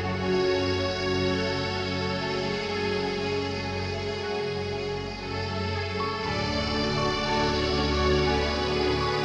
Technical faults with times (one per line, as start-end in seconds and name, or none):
none